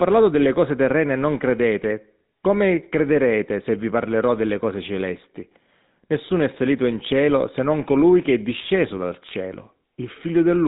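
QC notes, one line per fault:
Throughout: GSM full-rate codec. The speech was coded by a vocal-tract model driven by a regular pulse excitation that keeps only every third sample. This is a coarse scheme, and the damage fits the 13 kbps full-rate coder. Its band stops near 3.8 kHz, so there is no air or crisp sibilance above that point. The thinned pulse excitation replaces natural voicing with a plainly audible buzzy, gravelly roughness.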